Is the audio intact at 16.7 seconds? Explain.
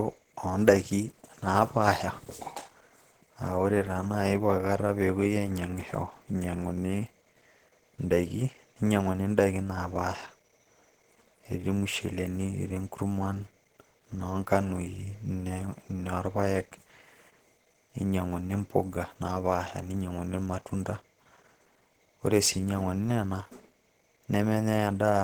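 No. At 16.7 seconds, as throughout the clip, the speech carries plainly audible Opus compression damage, likely from a low bitrate near 16 kbps. The encoder keeps each band's energy but, short of bits, fills detail with noise or folded copies, so the voice sounds hoarse and grainy. That sets it apart from MP3: there is little swirling and no dropouts, and content still reaches about 20.2 kHz, while the encoder ran in Opus's hybrid speech mode.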